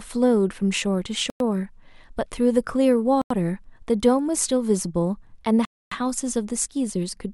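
Speech drops to silence three times, at 1.30 s, 3.22 s and 5.65 s, for 0.10, 0.09 and 0.26 s. These are likely Bluetooth stalls, the buffer running dry.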